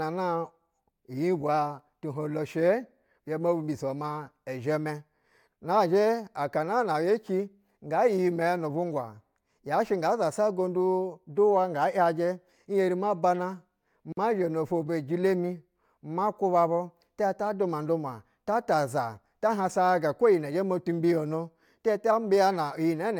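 Two separately encoded pieces of this speech were joined without trimming, leaving a gap at a join of encoded pieces at 14.12 s. The encoder's start-up delay on the second piece and the padding on the last frame of the first both survived the splice. The result is a sudden 48 ms gap inside continuous speech, its edges softened by the codec, lasting until 14.17 s. The speech then picks up exactly where it broke off.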